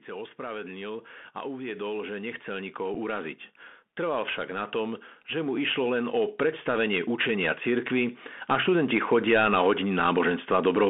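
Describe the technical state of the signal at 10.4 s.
At 10.4 s the speech carries Bluetooth CVSD headset codec damage, present throughout: one-bit adaptive delta modulation confines it to 200 Hz–3.5 kHz, adding granular hiss and scratchy sibilants.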